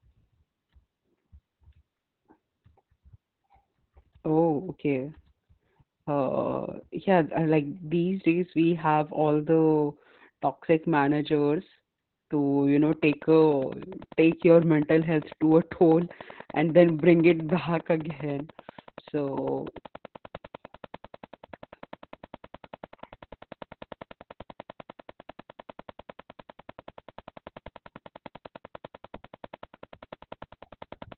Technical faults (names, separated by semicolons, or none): Opus voice compression; train of clicks